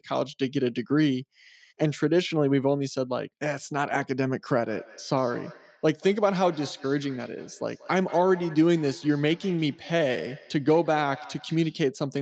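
From 4.68 to 11.86 s there's feedback echo between two devices: the speech comes back roughly every fifth of a second, thinner each pass, peaking about 20 dB down.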